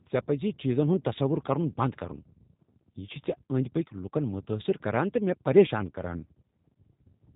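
Throughout, the speech carries G.729 codec damage: nothing above 4 kHz, plus a rough, synthetic buzz from pulse-based rebuilding at what sounds like 8 kbit/s, unlike clean narrowband filtering.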